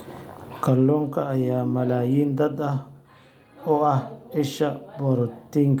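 No technical faults can be heard anywhere in this speech recording. There is nothing to place on a timeline or trace back to a cause.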